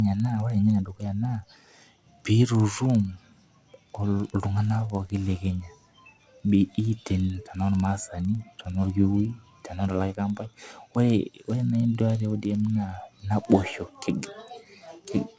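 Speech, with a regular ticking throughout, at 20 ticks per second. The cause is a resampler restarted on every block. Each 50 ms block was converted alone, which fits a 48 kHz to 16 kHz conversion, so every block edge carries a small error. The ticks vanish in silent gaps.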